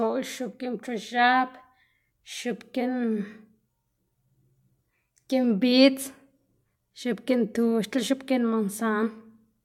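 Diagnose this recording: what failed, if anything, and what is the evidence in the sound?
Nothing in the speech points to a failure at any stage, from wiring and conversion through buffering, processing, transmission and storage to playback.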